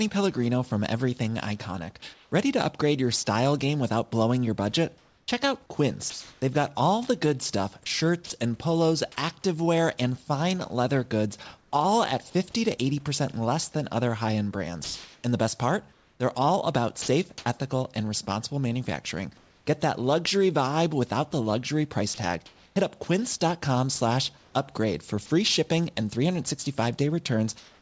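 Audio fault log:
2.14–8.30 s, 14.84–19.66 s and 22.14–27.81 s, sound chopped by the voice detector: within each stretch the speech turns choppy, with soft syllables and word edges dropping out into a flat hiss before the real room background returns, so the background flickers between live and synthetic. The likely cause is a voice detector toggling transmission on and off and the receiver filling the gaps with comfort noise, about 0.86 s of sound lost in the first stretch (ending before "and polos activewear and"), 1.1 s in the second (after "than other high end") and 0.8 s in the third (after "without the luxury price").
11.58–11.72 s, comfort noise in place of the background: for about 140 ms the room background turns into a smooth, featureless hiss, about 4 dB quieter than the real background around it, which sits about 37 dB below the loudest sound. With no speech present the sender likely stopped transmitting, and the receiver generated noise roughly matched to the background's overall shape, losing its texture until the real signal resumed.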